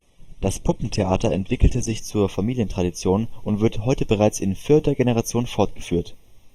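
Speech with channel delay (comb filtering) throughout. One channel lags by roughly a third of a millisecond before summing to mono. Notches from around 1.5 kHz upward make it hollow and phasey. From 0.0 to 2.0 s, the adaptive stream starts at a low bitrate. Treble is dull, with nothing above 12.1 kHz, pointing to a low-rate Opus start. Quality then jumps up without a gap.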